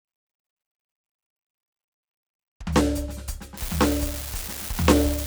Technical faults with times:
3.57-5.26 unreliable data bit

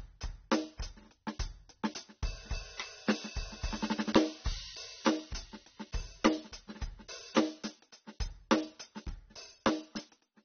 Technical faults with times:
0.00-10.44 AAC compression

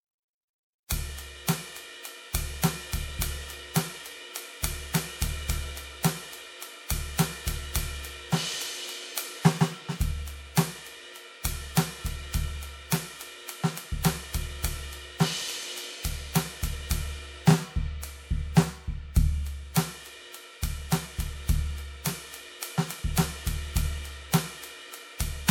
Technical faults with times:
0.00-25.50 generation loss

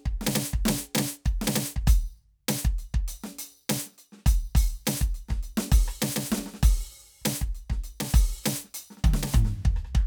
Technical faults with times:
none

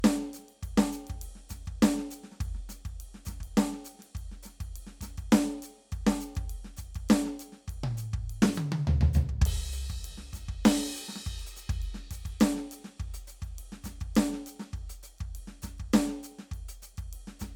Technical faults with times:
0.00-17.55 generation loss

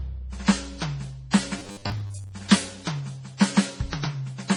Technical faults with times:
0.00-4.56 transcoding between lossy codecs
1.59-2.32 robotic sound from repeated short buffers

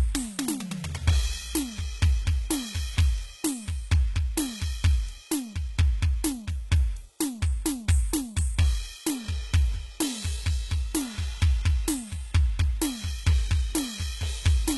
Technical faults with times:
0.00-14.77 HE-AAC compression

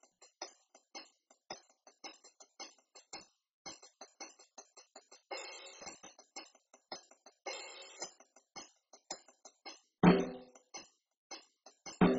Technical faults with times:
0.00-12.19 MP2 compression

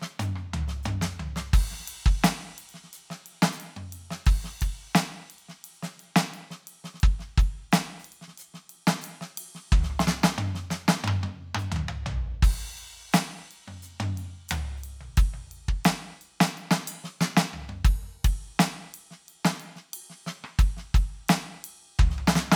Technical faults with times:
none

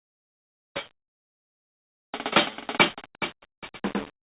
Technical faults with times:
1.16-1.90 call audio freeze

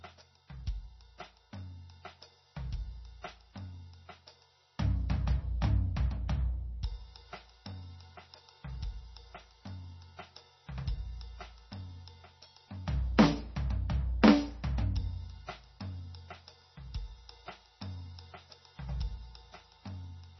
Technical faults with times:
0.00-20.39 MP3 compression

